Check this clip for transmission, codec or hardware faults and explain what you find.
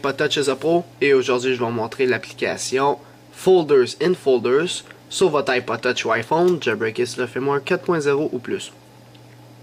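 Nothing here points to a transmission, codec or hardware problem; the audio runs along steadily without any glitch worth flagging.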